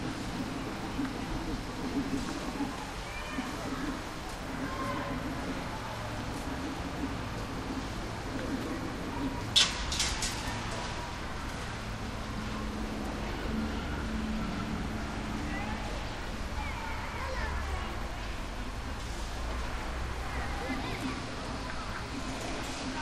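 Dropped samples at 8.02 s: a tiny stretch of this sounds recording, well under a millisecond, goes missing, so the waveform leaps straight to a later value. The result is one sharp click, a thin vertical line in the spectrum, likely from a brief buffer glitch.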